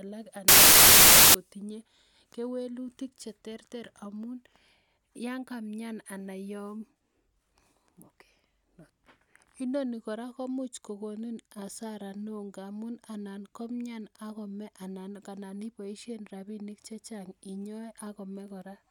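From 0.48 s to 1.34 s the speech gives way to loud, harsh broadband noise, the mark of samples built from the wrong bytes. The reader assembles each sample from mismatched bytes, whether shifted by one, reversed in order or misaligned, so the rapidly fluctuating low-order bits end up as the dominant part of every value. On a waveform this stretch fills with dense, random excursions; a spectrogram shows a flat, bright band of energy spanning all frequencies.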